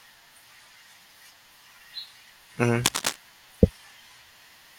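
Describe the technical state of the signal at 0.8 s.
The speech signal at 0.8 s is intact, with no technical fault audible at that moment.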